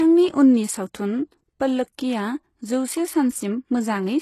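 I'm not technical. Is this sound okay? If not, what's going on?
No. The speech was likely squeezed hard by HE-AAC compression, which keeps only the lower part of the sound and fakes the treble by copying lower bits upward. Throughout the clip, s sounds come out gritty and metallic, with nothing above about 12 kHz.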